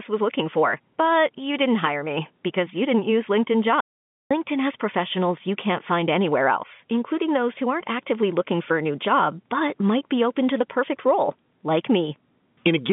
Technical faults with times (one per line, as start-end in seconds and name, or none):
3.80-4.31 audio dropout to silence